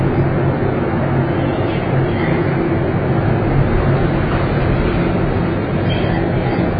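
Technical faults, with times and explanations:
Throughout, AAC compression: nothing reaches above about 5 kHz, and what remains sounds dull and smeared, with a warbling, fizzy texture where the sound is sustained. The likely cause is heavy AAC-LC coding at a very low rate, roughly what 16 kbps would produce, forcing the encoder to drop the top band and coarsely quantise the rest. A simple low-pass filter would darken the sound cleanly. The swirling, gappy texture below the cut-off marks it as a codec.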